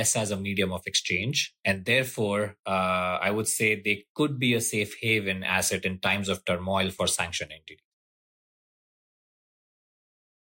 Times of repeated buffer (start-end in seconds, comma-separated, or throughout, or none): none